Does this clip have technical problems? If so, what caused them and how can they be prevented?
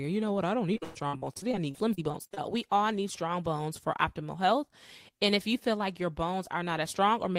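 Yes. Between 0.73 and 2.45 s the speech has repeated packet loss, giving a robotic sound. Over this stretch, audio packets keep arriving late or not at all. Each hole is patched by stretching the last bit of sound, and the next hole comes soon after. The longest gap is about 118 ms. Roughly 30% of the stretch is concealed fill, so it sounds choppy. A more stable connection and a larger jitter buffer would prevent it.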